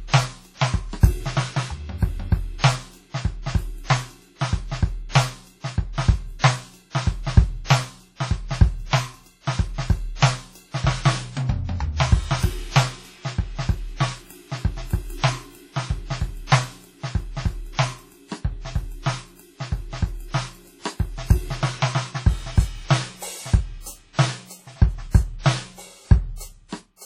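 Throughout the music, a ringing, washy quality with hiss breathing alongside the signal suggests heavy transform coding, likely WMA compression at a low bitrate around 32 kbps. The spectrogram shows a hard ceiling near 17.9 kHz with weak partials blotted out. At 6.39 s and again at 7.64 s, pre-echo smears a sharp attack: coding noise spreads backward about 48 ms and 57 ms, heard as a brief hiss before a softened hit. The waveform shows noise ahead of each transient.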